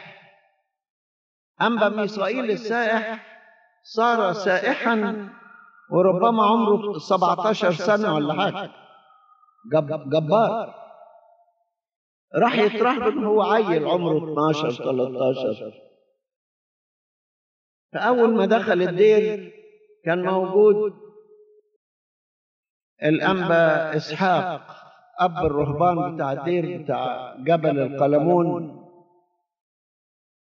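From start to finish the sound carries a doubled audio track: a second, full-band copy trails the original by roughly 150 ms, sitting around 10 dB lower. It is likely caused by the signal being captured twice, once through a slower path. Each onset is answered by a dry, flat slap with no decay or room colour. On a waveform every transient gets a smaller twin just behind it; a spectrogram shows each event repeated as a fainter ghost at that fixed offset.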